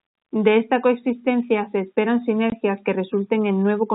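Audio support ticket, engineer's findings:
Packet loss filled with silence, single dropout at 2.5 s. Jitter buffer or receiver played zeros for a missing frame; 20 ms hole fits one lost packet. Hard edges at both ends, sound cut off mid-flow. Telephone band of the G.711 link, nothing above 4 kHz, carries through either side of the gap.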